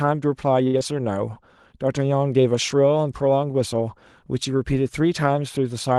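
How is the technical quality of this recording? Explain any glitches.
Two glitches sit close together near the start of this speech clip, over a call path whose sound extends to about 12 kHz.

From 0.67 to 0.76 s there is a short stall from a late packet. A packet arrived late, so the jitter buffer ran dry and the last sound was held for about 62 ms before playback resumed where it left off. The held sound has a faint buzz or dip. Unlike a loss, nothing is skipped; everything after it just plays about 62 ms later.

From 0.78 to 0.83 s comes a short concealed packet loss. About 40 ms of audio never arrived, and the receiver bridged the gap with roughly 31 ms of synthesized continuation. This brief smear or wobble differs from the stall because real sound is actually missing, so a consonant can drop out.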